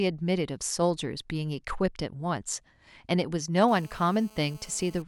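From 3.68 s to 5.02 s a GSM phone buzz sits under the speech, about 26 dB below it. A nearby 2G handset on a call was transmitting in bursts at 217 Hz, and some stage of the audio circuit rectified the radio pulses into the audio band. The result is a hard, raspy 217 Hz buzz dense with harmonics, nearly steady in level and unrelated to the speech.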